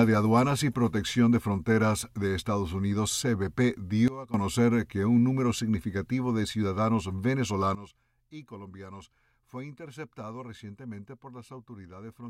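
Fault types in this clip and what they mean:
Sudden gain jump: the level drops abruptly by about 16 dB from 4.08 to 4.34 s, then by about 15 dB from 7.75 s to the end, with sound and background noise falling together, likely a digital gain change applied without a ramp.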